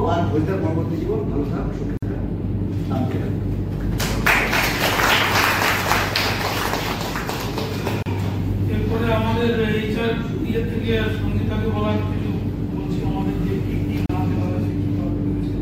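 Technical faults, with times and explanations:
1.97 to 14.09 s, gap at a join of encoded pieces: silences of 52 ms at 1.97 s and 34 ms at 8.03 and 14.06 s, every 6 s, with smeared edges. Separately encoded pieces kept their untrimmed start delay and end padding, then the sound resumes.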